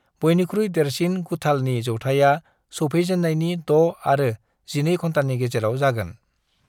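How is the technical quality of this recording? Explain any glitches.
No glitches can be heard in the recording; the speech signal remains technically intact throughout, with nothing breaking into or disrupting it.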